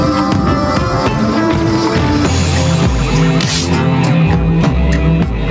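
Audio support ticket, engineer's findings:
Gain pumping throughout: gain ducks around 5 dB under each loud sound, dynamics squashed. Likely cause: input gain far too high, fast limiter clamping every peak. Band-limited to 8 kHz, consistent with G.722 call path.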